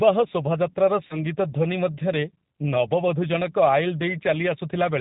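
Throughout, the speech sounds rough and slightly synthetic, with nothing above 4 kHz. This is the G.729 codec at 8 kbit/s, rebuilding speech from a vocal tract filter, pitch predictor and sparse pulses.

From 1.07 to 1.18 s, the sound stretches and fades, then stays weak briefly. About 30 ms went missing, which fits a single lost packet, and VoIP packet loss concealment extrapolated over the gap.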